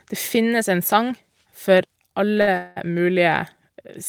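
A short stall from a late packet occurs at 2.37 to 2.41 s and again, directly after it, at 2.41 to 2.49 s. Each time a packet had not arrived when it was due, so the jitter buffer ran dry and the receiver held the last sound until the data came in, about 19 ms and then 58 ms. The sound is drawn out with a faint buzzy smear, then continues from the same point with nothing lost, so everything after it runs slightly later.

A call audio freeze follows at 2.57 to 2.78 s. The sound hangs for about 191 ms as a buzz that fades but never drops to silence before the audio picks up exactly where it stopped. This is likely packets being held up in transit until the jitter buffer emptied, leaving the receiver to fill the wait. Nothing is missing. A pause has been inserted, and the remaining audio is pushed later by that amount.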